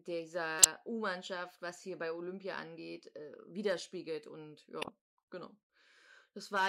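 Speech with two short bursts, a fairly loud one at 0.59 to 0.66 s and a quieter one at 4.82 to 4.89 s, each spanning a few frames. These are corrupt frames decoded: damaged compressed data was played anyway, and misread values put energy at the wrong frequencies. Crackle also sits on the peaks at 3.66 to 3.72 s, just after "angeht äh", and again at 6.55 to 6.68 s. That is hard clipping, with the signal about 3 dB too hot, so its peaks are cut flat and throw off high harmonics.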